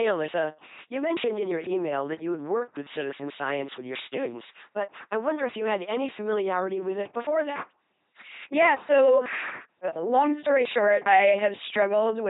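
From start to finish, the speech passes through an LPC-10 vocoder at 2.4 kbit/s, and the damage is heavy. Each moment is rebuilt as either buzz or hiss through a simple tract filter. The voice sounds robotic and mechanical. Nothing remains above 3.8 kHz.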